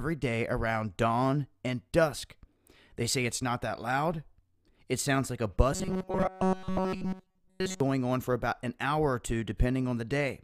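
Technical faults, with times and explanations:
5.73 to 7.80 s, robotic sound from repeated short buffers: the sound collapses into a rigid, metallic buzz at 188 Hz, with practically the whole stretch made of repeats. New audio likely arrived too slowly, so a 5.3 ms slice kept looping, fixing that pitch.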